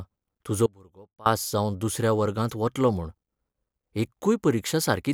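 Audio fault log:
0.66–1.26 s, audio dropout to a faint residue: the speech cuts out abruptly for 0.6 s and comes back just as suddenly. The gap isn't silent, since a faint sound sits about 25 dB down, so the path likely stayed live while the feed itself dropped.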